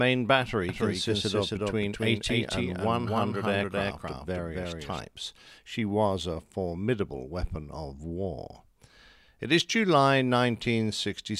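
A doubled audio track runs from 0.69 s to 5.01 s of this speech recording: a second, full-band copy of the same sound trails the original by around 300 ms at roughly equal loudness, with no decay or room colouring, and it cuts in and out abruptly at those points. That clean, fixed-offset repeat likely comes from the signal being picked up again through a slower capture path, or from an edit leaving two misaligned copies layered together.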